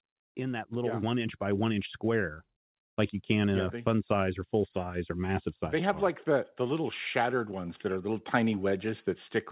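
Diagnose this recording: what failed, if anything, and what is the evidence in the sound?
The automatic gain control in the call processing stage is the culprit. From 0.34 to 1.76 s, the speech and the background noise swell together by about 5 dB, levelling off just before "square like you can". Because the noise floor climbs along with the speech, it's not the talker getting louder. The AGC judged the input too quiet and ramped its gain over about a second and a half.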